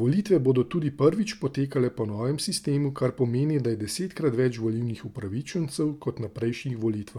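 No technical faults turn up anywhere in the speech recording, so there is nothing to describe in time order.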